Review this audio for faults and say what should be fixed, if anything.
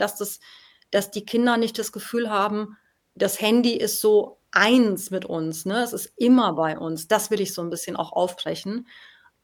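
No faults; nothing to fix.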